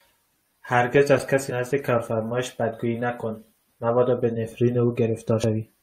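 At 1.50 s and again at 5.43 s the speech breaks into a brief glitch, the sign of damaged data in a compressed stream: corrupted bytes make the decoder misread a frame and lose sync. On a spectrogram each event appears as a thin vertical disturbance.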